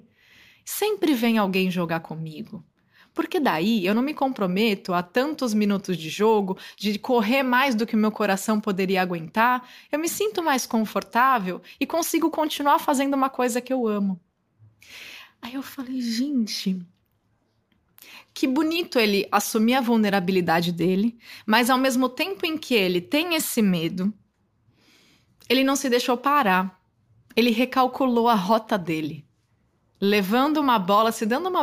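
A gritty, inharmonic fizz rides on the speech from start to finish, loudest on strong and bright sounds. This is crude rate conversion. Samples were repeated in a fixed pattern with no filtering, which fits a nearest-sample step from 32 kHz to 48 kHz. The error sits roughly 20 dB below the speech.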